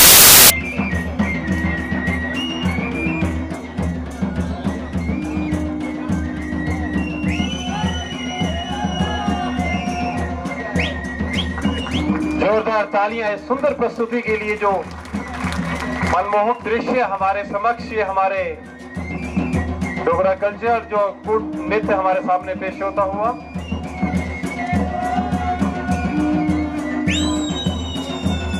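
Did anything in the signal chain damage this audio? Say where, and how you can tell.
Yes. From 0.0 to 0.5 s, at the sample-format conversion stage, there are samples built from the wrong bytes: each sample's bytes are misassembled, so the fast-changing low bits dominate. The result is loud, harsh broadband noise, unlike clipping, which distorts the original sound rather than replacing it.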